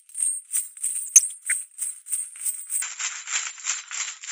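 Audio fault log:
1.05–1.64 s, DAB burbling. The sound bubbles and squelches, with brief chirps over the programme. Weak reception lets a few bits in a thousand slip past error correction. Corrupted samples put short noise blips in single sub-bands, and corrupted scale factors make sub-bands jump in level, frame by frame.
2.82–4.31 s, input switched to a poorer device. The sound abruptly turns dull, with nothing above 7.6 kHz. A faint new background noise sits about 50 dB down. There is no gap, and the level holds roughly steady. A narrower-band input likely took over.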